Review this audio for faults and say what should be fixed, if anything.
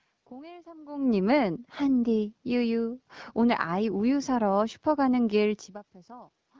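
Nothing here needs fixing, since the speech comes through without any technical faults to report.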